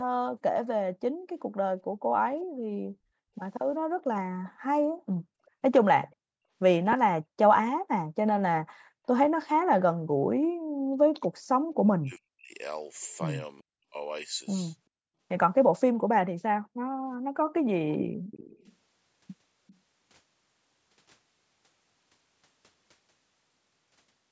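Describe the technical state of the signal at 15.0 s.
At 15.0 s the speech signal is intact, with no fault present; it has passed through normal call microphone processing, which leaves nothing above 8 kHz and trims the lowest bass as expected.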